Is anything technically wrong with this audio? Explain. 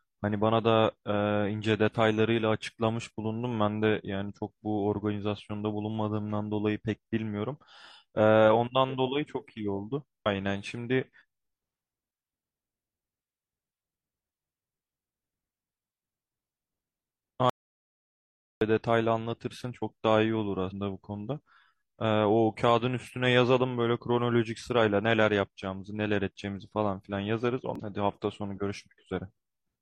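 Yes, there are a few problems. Damaged data in the compressed stream shows up at 10.22–10.27, 20.67–20.72 and 27.76–27.80 s: corrupted frames knock the decoder out of sync, giving short glitches such as a chirp, squawk, click or brief hole. There's also an audio dropout to silence from 17.50 to 18.61 s, about 1.1 s of dead silence with no room tone, likely from the input briefly disconnecting while recording carried on.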